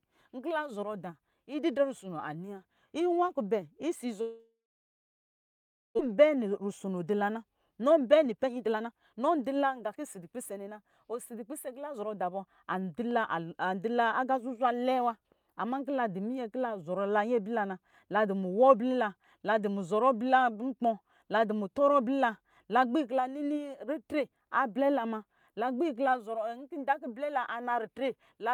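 From 4.21 to 6.01 s the speech collapses into a fading buzz and then about 1.4 s of silence, and resumes with roughly a second of material missing. This is likely a long network dropout, not a brief packet loss, because concealment gives out and silence follows.

Between 7.35 and 13.09 s the speech runs at about 112% speed while its pitch stays put. This is a jitter buffer speed-up trimming around 0.7 s of short pitch-period pieces. Unchanged pitch separates it from a resampling speed error.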